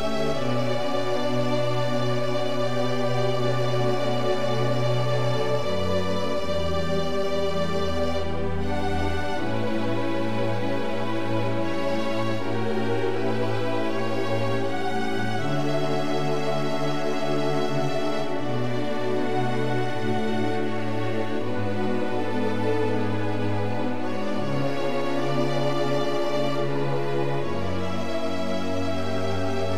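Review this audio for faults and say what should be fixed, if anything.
Nothing stood out on listening, so there is nothing here that needs fixing.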